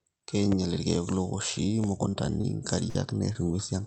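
The first thing you'll notice is a loud pop at 0.52–0.55 s, and another at 1.84–1.86 s. Each is a single sharp hit sitting roughly 10 dB above the speech, and the talking carries straight on underneath. That's the classic signature of a sudden voltage step getting into the chain, likely a switch, a plug being nudged, static discharge or a driver glitch. The downstream circuitry shapes it into a short, punchy pop or thump.

After that it turns into network trouble. There's short concealed packet loss at 2.09–2.15 s, where about 40 ms of audio never arrived, and again at 2.41–2.45 s and 3.33–3.37 s, each about 20 ms. The receiver bridged each hole by extending the last bit of sound, pitched if voiced and noisy if not, then crossfaded back. So you get little smears or wobbles, and a quick consonant can just go missing.

The bigger one is a burst of packet loss at 2.89–2.97 s, roughly 60 ms gone in a row. 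Here the concealment had to run longer, stretching the last sound into a held buzz or fading hiss as it turned itself down, and the speech picks up again further along with that chunk simply missing.

All of this rides on an Opus call path whose top end stops around 8 kHz, and that band limit holds throughout.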